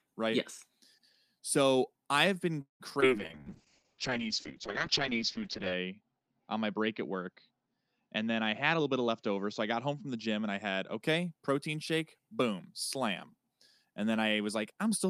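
At 2.61 s, just after "I have been", there is a call audio freeze lasting about 0.2 s. The last sound is carried on as a fading fill that falls to silence for roughly 0.12 s. When the audio resumes it picks up exactly where it stopped, so nothing is lost but about 185 ms of extra delay is inserted. The likely cause is packets held up in transit until the jitter buffer ran dry.

Two instances of short concealed packet loss follow at 2.90–2.92 s and 3.00–3.04 s, covering about 20 ms and 40 ms of missing audio. The decoder only briefly extends the preceding sound before blending back, so each is heard as a quick smear or wobble rather than a gap. Because more was skipped than filled, the receiver also claws back part of the delay added by the freeze, roughly a few tens of milliseconds in total.

From 3.18 s to 11.06 s a call bitrate drop takes the encoder from 32 kbps down to 7 kbps, staying at the bottom for about 2.5 s. 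The audio bandwidth shrinks from 20 kHz to 8 kHz, removing the top of the spectrum, and the coarser coding makes the sound muffled, rough and watery. Full quality returns around 11.06 s, with "protein shake boom slam" coming just after the recovery.

Inside that stretch, from 8.76 s to 10.27 s, a jitter buffer speed-up plays the audio at about 112% of normal speed. The receiver repeatedly cuts out short pitch-period segments to bring the buffer back toward its target, taking out around a fifth of a second in all. The pitch stays the same, but the delivery sounds noticeably hurried over those 1.5 s.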